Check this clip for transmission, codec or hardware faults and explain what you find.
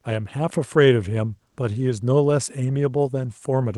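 One transmission fault is present, in speech carried over a call path whose high end stops around 12 kHz.

Comfort noise in place of the background, 1.49 to 1.57 s: for about 80 ms the real background, about 53 dB below the loudest speech, is replaced by steady synthetic noise. This likely comes from Opus discontinuous transmission. The pause sounds flat and featureless, with a level shift of about 3 dB.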